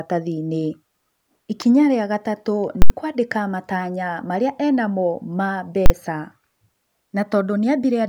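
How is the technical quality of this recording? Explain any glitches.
The speech has three noticeable glitches: one sharp snap and two full-scale dropouts.

At 1.62 s there's a sharp snap or tight cluster of clicks riding on top of the speech. It sounds like an electrical switching spike, most likely a nearby switch, motor or static discharge arcing briefly and the audio line picking that up.

Then there are two bursts of invalid numbers at full scale, at 2.82 to 2.90 s (80 ms) and at 5.86 to 5.90 s (40 ms), the second just after "ena mo ma". A calculation spat out infinite or invalid values, which got pinned to maximum level for the whole block. You hear a hard pop going in and out with the speech gone in between.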